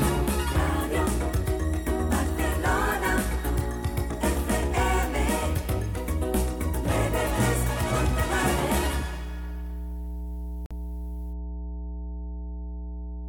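A steady mains hum at 60 Hz runs the whole way through, fairly prominent at roughly 10 dB under the signal, likely a ground loop leaking power-line tone into the chain. At 10.66 s there's a sharp hole of about 46 ms, ending at 10.72 s. That's most likely a Bluetooth dropout, with a couple of late packets discarded, and the sound picks up as if it had kept playing.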